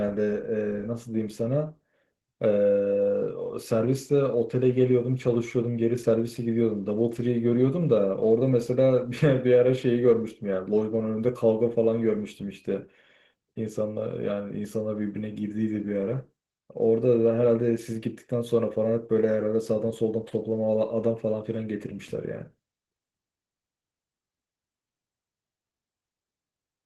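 Opus voice compression affects the whole clip. Coarse coding makes the speech sound hoarse and slightly robotic, which fits a bitrate near 16 kbps.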